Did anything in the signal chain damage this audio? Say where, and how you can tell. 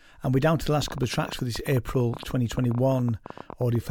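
Yes: a train of clicks, irregular at about 14 per second, runs from 0.82 s to the end, peaking about 5 dB over the speech, likely interference.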